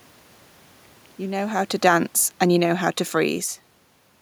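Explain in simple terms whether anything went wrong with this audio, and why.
One thing did go wrong: automatic gain falling. From about 1.29 s to 3.5 s the level control decided the input was too loud or too noisy and kept turning it down, so the voice and the room noise behind it sink together. The talker's shifts around 1.5 s and 3.5 s are natural movement, not part of it.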